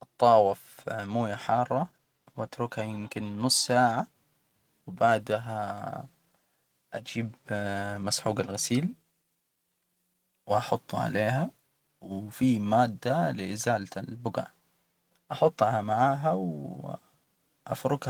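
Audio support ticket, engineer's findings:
Nothing stood out on listening to this speech clip, which passes through Opus voice compression in hybrid mode at 20 kbps.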